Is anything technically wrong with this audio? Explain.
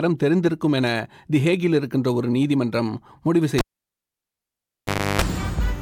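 Yes. At 3.58 s the cable's pulled and plugged back in: a pop, then near silence for about 1.6 s while it's out, then a 50 Hz mains buzz lasting about 0.32 s as only the tip touches, and another pop when the sound comes back at 5.22 s.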